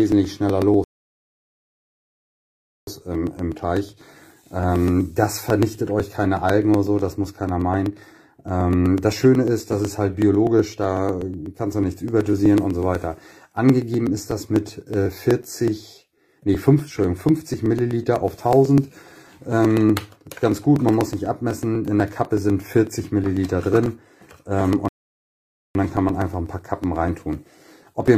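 From 0.12 s to 28.08 s the audio carries periodic USB or driver dropouts: every 0.124 s, about eight times a second, roughly a millisecond of signal is skipped outright rather than filled with silence, some two hundred times in all. Each skip leaves a small discontinuity in the waveform, heard as a steady tick or pop that is only audible while sound is present. The ticks never stop the audio or delay it; material simply goes missing at each one.

A rebuffering stall interrupts the sound at 0.84 s, cutting to silence until 2.87 s, about 2.03 s of added time. A second stall runs from 24.88 s to 25.75 s, adding about 0.87 s. Unlike the dropouts, these gaps are long and irregular, and nothing is lost: playback halts while the player waits for more downloaded audio, then resumes exactly where it stopped.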